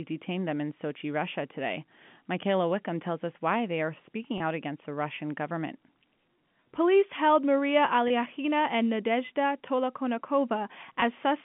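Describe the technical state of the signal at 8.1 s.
At 8.08 to 8.10 s there is a packet loss with pitch repetition. About 20 ms of audio never arrived, which fits a single lost packet. The receiver filled the hole by replaying the last pitch period of the speech, looping that one cycle until fresh audio resumed. The gap is this short, so it comes across as a brief, slightly held and buzzy sound rather than a dropout. The narrow telephone band of the G.711 line stays audible through it.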